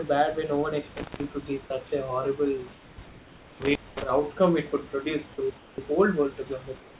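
Intermittent contact at 0.97–1.24 s and 3.62–4.09 s: a loose connection opens for about 180 ms and then about 220 ms, cutting the sound out, with crackle at each edge and faint hiss in the gaps.

Comfort noise in place of the background at 2.72–2.98 s, 5.58–5.78 s and 6.80–6.99 s: during these pauses the detailed room background, about 25 dB below the speech, turns into steady, featureless hiss. It is about 2 dB quieter in the first and last pauses and about 5 dB quieter in the middle one. The likely cause is discontinuous transmission, with the receiver filling the silence with synthetic noise.

Onset clipped by the voice detector at 5.76–5.78 s: the sound returns abruptly and loses its soft beginning. The likely cause is a slow voice detector that left those first 20 ms unsent.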